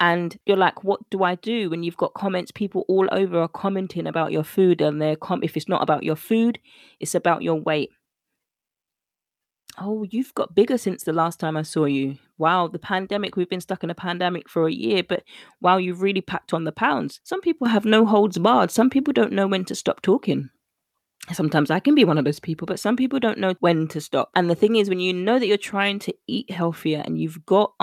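Nothing goes wrong anywhere in the recording, so there's no technical fault to point to.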